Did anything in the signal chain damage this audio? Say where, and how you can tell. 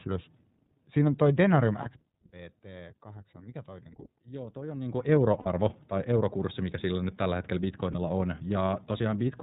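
Yes, two things, both at the codec and network end. The whole clip has gone through the iLBC codec: it's band-limited with nothing above 4 kHz, and the speech has that slightly rough, synthetic edge you get when each frame's excitation is coded on its own. The damage is plainly audible, and the character fits iLBC's 13.33 kbps mode with 30 ms frames.

Then there are lost iLBC frames, where packets went missing on the network and the decoder had to cover the gaps. You can hear short held, faintly buzzy patches at 1.82 s and 7.92 s, about 30 ms each, consistent with a single frame dropped, and a longer one at 5.39 s lasting about 60 ms, which fits two frames in a row. That's the concealment repeating the last pitch cycle with some noise mixed in. Because iLBC frames don't depend on each other, the speech snaps straight back once real frames arrive again.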